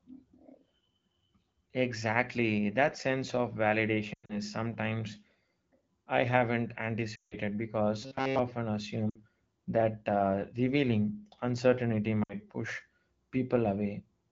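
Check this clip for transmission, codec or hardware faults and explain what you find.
There are two kinds of fault in this speech clip, and they both sit on top of a wideband phone call that sounds like AMR-WB running at a clean rate, probably around 12.65 kbit/s.

Lost AMR speech frames show up at 4.13 to 4.39 s, 7.15 to 7.37 s, 9.09 to 9.22 s and 12.23 to 12.34 s. Corrupted frames got thrown out, so the decoder kept stretching the last good pitch and vocal tract shape while it turned the level down. The first one is broken up, about 140 ms gone across 160 ms with a longest stretch of 100 ms. The second is a solid 160 ms, so it drops to near silence within two frames before the speech returns a bit weak. The last two are short 60 ms dips.

There's a robotic sound from repeated short buffers at 8.02 to 8.39 s. It's a rigid metallic buzz at 134 Hz that only loosely follows the speech. Audio was likely arriving late, and the gaps were filled by looping a tiny chunk, which fits a buffer of roughly 7.5 ms. 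Most of that stretch is repeats.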